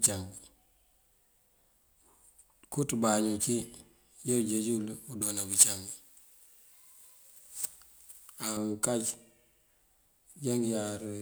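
Speech, and from about 5.22 to 8.57 s it turns thin, bright and hissy on the sibilants. That's pre-emphasis left on: the J.17 treble boost went in but the matching de-emphasis never came back out, so 10 kHz sits about 11 dB hot relative to 1 kHz.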